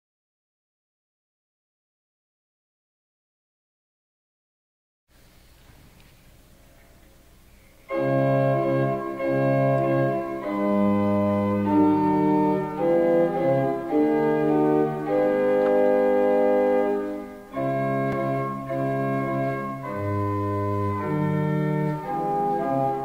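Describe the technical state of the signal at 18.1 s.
A repeated buffer occurs at 18.12 s: fresh audio arrived late, so the playback device sent its last block out a second time. The repeated piece lasts about 5 ms, which fits a 256-sample buffer, and its hard joins make a brief click.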